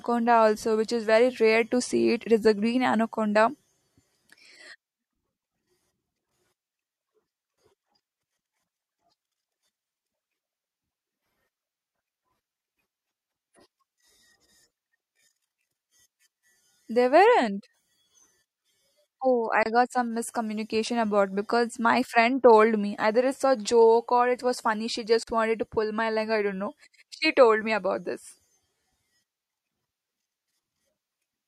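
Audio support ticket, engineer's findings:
Gap at a join of encoded pieces: silences at 19.63–19.66 s (28 ms) and 25.23–25.27 s (42 ms) in speech. Separately encoded segments were concatenated with encoder delay and frame padding left untrimmed. Unlike dropout, nothing is lost; the sound resumes exactly where it stopped.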